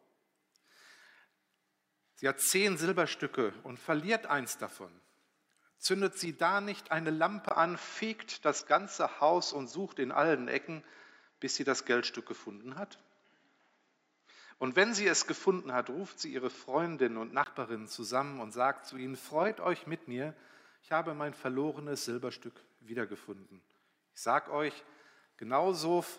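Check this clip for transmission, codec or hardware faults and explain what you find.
One fault is audible. Input switched to a poorer device, 7.49 to 17.46 s: likely a change to another microphone, with a 20 ms gap, sound capped at 7.6 kHz, about 5 dB level shift and new faint noise.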